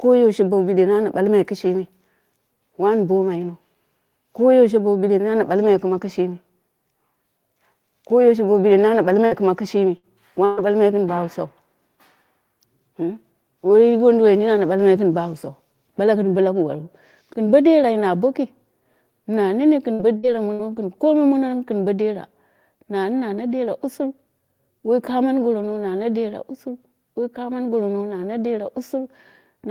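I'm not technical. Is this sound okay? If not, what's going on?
No. The recording has bursts of packet loss. Chunks of the audio got lost or arrived too late while travelling over the connection, six times: at 9.25, 9.97 and 10.45 seconds, then right after "na nene" at 19.93, 20.17 and 20.53 seconds. Each time, the receiving end stretches out the last sound it had and fades it for about 60 ms, or 120 ms at 10.45, so you hear a short buzz or hiss. The speech then jumps ahead, with that bit missing.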